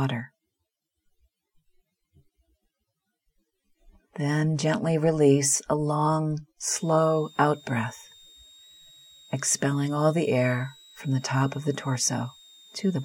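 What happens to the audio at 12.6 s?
At 12.6 s you're in the middle of a switching supply whistle that starts around 6.75 s and runs right to the end of the clip. It's a thin, high tone near 4 kHz, wandering between about 3.6 and 3.9 kHz, sitting roughly 30 dB under the sound. That's a switching power supply dropping into an audible burst mode, or beating against another supply, and it leaks into the audio as a whine.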